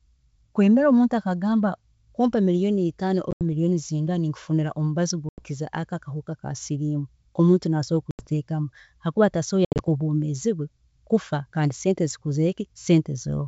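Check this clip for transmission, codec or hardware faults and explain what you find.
Four hard-edged silent holes break the speech: 3.31–3.42 s (just after "kumpa million itaano"), 5.29–5.44 s, 8.11–8.27 s and 9.65–9.88 s. Each removes 80 to 110 ms, and the first and last are split into scattered gaps. After each hole the speech comes back slightly distorted before settling.

This is packet loss on an ADPCM call. Lost packets are replaced by silence. The decoder's adaptive predictor and step size then no longer match the sender's, and they take some tens of milliseconds to realign. The G.722 wideband coding itself, consistent with 64 kbit/s, adds at most faint damage.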